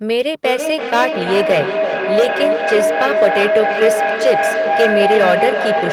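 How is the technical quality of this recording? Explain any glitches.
The quality is poor: there's hard clipping on the whole clip, and a feedback howl comes in early and never lets go.

The hard clipping runs from start to finish. The speech is pushed about 8 dB past what some stage in the chain could handle, so the loudest peaks get sliced flat. Only a few percent of the waveform actually hits the ceiling, but those squared-off tops throw extra harmonics way up high. You hear it as a gritty crackle riding the louder syllables.

The feedback howl starts at 0.44 s and is still going when the clip ends. It sounds like two devices in the same room joined the same call. Sound from one loudspeaker reaches the other microphone and loops around, getting louder each pass instead of dying away. The loop settles on a tone somewhere around 700 Hz, and its round-trip time is roughly a third of a second. 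At its peak the howl is nearly as loud as the speech, only about 1 dB under it.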